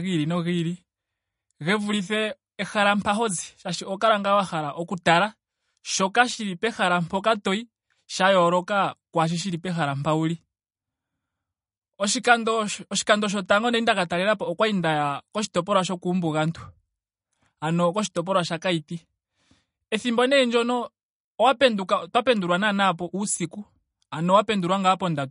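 Throughout the speech there's plainly audible MP3 compression damage: nothing above about 10.6 kHz, with watery, swirly smearing, likely from a bitrate around 40 kbps.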